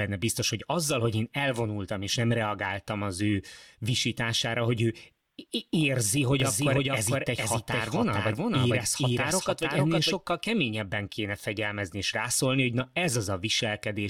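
A second, slower capture path or an out-of-step edit has likely mixed this speech clip in twice, producing a doubled audio track from 6.40 to 10.14 s. A full-band copy trails the original by about half a second at roughly equal loudness, with no decay or room colour, so everything in that stretch is heard twice. The copy cuts in and out abruptly, starting just before "keményebben kéne fegyelmezni és".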